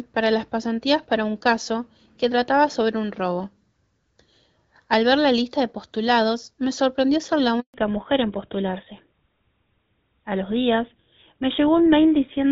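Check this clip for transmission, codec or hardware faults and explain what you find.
Two related faults show up in this speech clip, both at the same moment: a brief dropout followed by a permanent loss of bandwidth. The call starts out as light-sounding HD Voice, consistent with AMR-WB around 12.65 kbit/s.

Handover gap, 7.60 to 7.74 s, right after "me sorprendió ser la": the audio cuts out for about 140 ms. While the call hopped networks, no speech frames got through, so the sound fades almost instantly and stays silent until the new link picks up.

Fallback to narrowband, from 7.74 s to the end: once the call resumes, nothing above 4 kHz is left. The link has dropped out of wideband to an older codec, likely GSM full rate, so the rest sounds duller, boxier and rougher than the opening.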